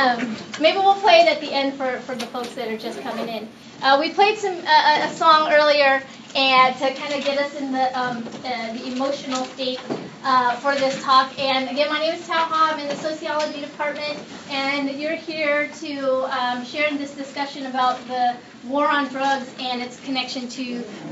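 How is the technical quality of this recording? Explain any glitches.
One glitch stands out. From 2.13 to 3.63 s there is imaging from linear upsampling: audio at 16 kHz was raised to 44.1 kHz by joining samples with straight lines, dulling the top and leaving a mirrored copy between 8 and 16 kHz, roughly 25 dB down, heard as faint metallic shimmer. Unlike aliasing, nothing folds downward into the band.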